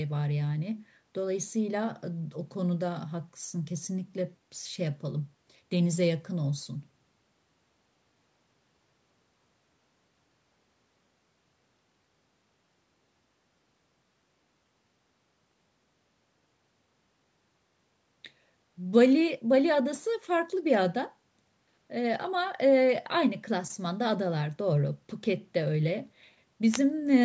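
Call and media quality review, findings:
Nothing stood out on listening; the speech carries the expected marks of call microphone processing, with the lowest bass trimmed and no content above 8 kHz.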